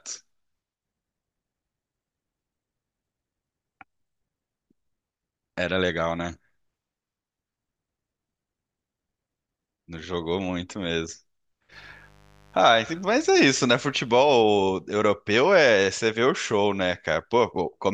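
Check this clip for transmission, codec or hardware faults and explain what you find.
One hardware fault turns up: a burst of mains buzz in the speech from 11.70 to 14.64 s. Interference from the 50 Hz supply is getting into the audio path, most likely through a light dimmer, a rectifier or a poorly shielded cable. Sharp switching spikes arrive twice per mains cycle and spread into a ladder of 50 Hz harmonics reaching several kilohertz. The result is a steady, raspy buzz sitting well below the speech level for those three seconds.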